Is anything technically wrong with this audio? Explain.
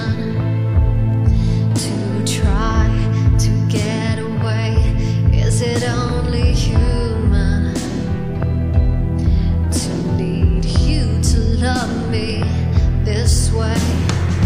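Yes. From 1.10 s to 13.42 s there are clock drift buffer slips, likely from two devices whose clocks disagree by around 150 ppm, so the buffer between them drifts until a few samples are dropped or repeated. This produces a regular click every 1.12 s.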